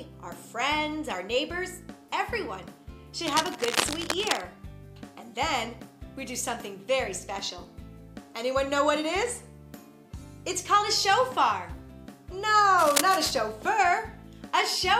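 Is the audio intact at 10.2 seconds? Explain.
Yes, the audio is intact at 10.2 seconds, with no dropout, click or other fault at that point.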